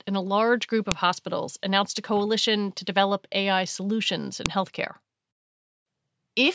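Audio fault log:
0.92 s and 4.46 s: file header played as audio. A sharp, loud click cuts in after "and a large group", before "hospitals announced a coalition", and again after "solutions in". Each is a WAV header left in at a join, its bytes playing as samples.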